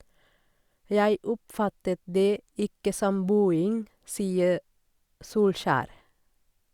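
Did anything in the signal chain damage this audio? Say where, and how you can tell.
No, nothing in the chain has left an audible mark on this speech recording; the signal holds steady throughout, with no sign of damage from any stage between capture and playback.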